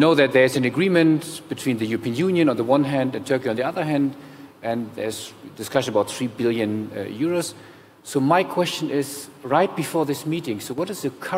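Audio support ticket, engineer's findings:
Abrupt level step 10.73–10.78 s, about 6 dB down for 50 ms. One channel drops out, likely a brief contact or link loss on one side before the mono sum. Never goes silent, unlike a full dropout; a clean step, not a fade.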